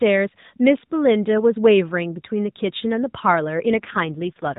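At about 3.66 s the speech turns rougher and more synthetic, and it stays that way right through to the end of the clip. That's an AMR rate drop: the link apparently got weak, so the network pushed the codec down to a lower mode and spent the freed bits on error protection. The buzzier texture fits a step from around 12.2 kbps to about 5.9 kbps. There's no gap and the band doesn't change, still the usual narrowband mobile sound with nothing above 4 kHz.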